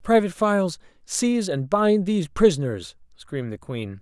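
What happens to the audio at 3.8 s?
Nothing goes wrong at 3.8 s; the speech carries on intact through that moment with no dropout, click, distortion or other audible fault.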